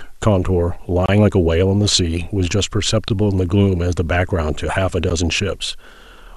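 From start to end, a steady, even hiss sits under the speech. This is low bit depth with dither. The signal was rounded to very few levels, which fits 10-bit audio. Added dither turns the rounding error into white noise, around 40 dB below the speech, with no distortion.

At 1.06 to 1.09 s, a 26 ms silence cuts into the sound. This is a gap at a join of encoded pieces. Shorter dropouts of about 11 ms follow at 3.08 s and 5.10 s, two seconds apart. Each join kept the encoder's start delay and end padding. The edges are smeared by the codec, and the sound resumes where it stopped.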